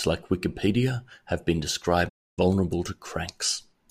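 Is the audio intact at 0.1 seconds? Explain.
Yes, the audio is intact at 0.1 seconds, with no fault present at that moment.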